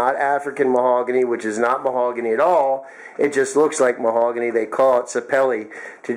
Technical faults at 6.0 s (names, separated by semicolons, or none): none